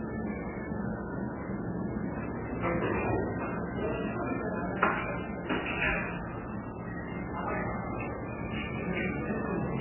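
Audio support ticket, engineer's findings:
Throughout: nothing above 3 kHz, dull and band-limited; heavy watery swirl, weak detail flickering in and out, transients smeared. Likely MP3 compression. Bit-starved encoder truncating the top band and zeroing weak frequency lines frame to frame; damage fits an 8 kbps stream.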